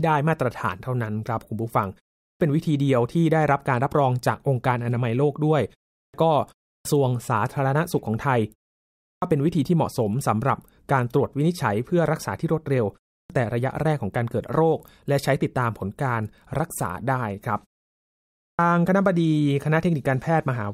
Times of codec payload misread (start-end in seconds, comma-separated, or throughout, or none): none